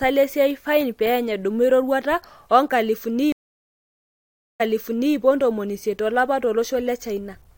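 At 3.32 s the speech cuts out for about 1.3 s, and when sound returns it picks up roughly 0.56 s earlier than where it stopped, so a short stretch is heard twice, with the reconnect over by around 5.15 s. This is a stream reconnect: the connection dropped, the player reconnected and restarted its decoder mid-stream from a resent burst. Unlike a plain dropout, the audio doesn't continue from the break. It jumps back, and the new decoder eases in rather than starting at full level.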